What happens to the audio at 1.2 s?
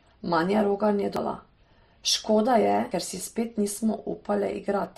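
Audio missing between chunks at 1.16 s: roughly a third of a second drops out and the two sides join abruptly, likely because the recorder lost material while switching between chunks, which fits 2-second chunks. Transcoding between lossy codecs also colours this moment: two sets of compression artefacts sound together and nothing remains above 15.7 kHz, fitting an MP3 stream at about 43 kbit/s that was likely re-encoded as Opus at about 48 kbit/s.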